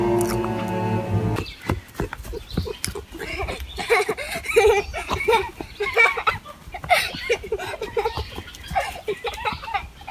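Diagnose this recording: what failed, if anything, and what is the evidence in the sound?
No fault is audible at any stage of this recording.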